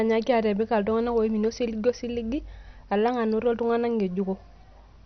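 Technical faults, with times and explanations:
Throughout, MP2 compression: the speech is dull, with nothing above 6.2 kHz, and carries a heavy gurgling, granular roughness as sub-bands flicker on and off. This is likely MPEG Layer II starved of bits, pointing to about 48 kbps. A plain low-pass filter would sound smooth.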